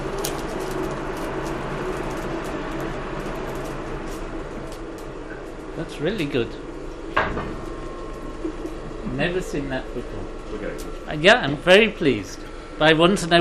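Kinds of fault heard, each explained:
MP2 compression: Throughout, the sound is dull and carries a gurgling, granular grit, with the top end flickering in and out. This is likely MPEG Layer II coding at a low rate, around 80 kbps, starving the upper sub-bands of bits so they drop out while the remaining bands are coarsely quantised.
DAB burbling: From 11.54 to 11.57 s a brief burst of burbling breaks through, with short blips of noise in single sub-bands. Bit errors, on the order of a fraction of a percent, have slipped past error correction into the coded data, corrupting samples across six frames.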